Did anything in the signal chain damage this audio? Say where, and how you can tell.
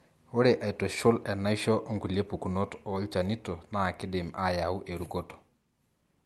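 No, nothing damaged it.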